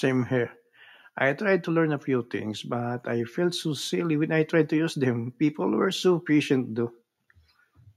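No technical faults are audible anywhere in the speech recording.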